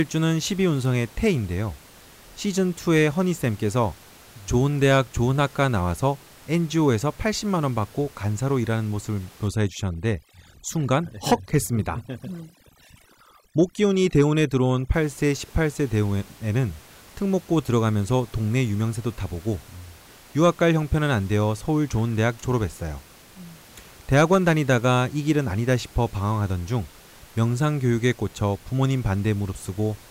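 From 9.48 to 14.94 s there is overdone noise removal. A noise reduction stage is working far too hard on this stretch. It pushes individual frequency bands down or out whenever they sit close to what it takes for noise. Quiet parts of the speech get caught and cut too. The background drops and breaks up into twinkling specks. Outside this span, room noise sits about 26 dB below the speech.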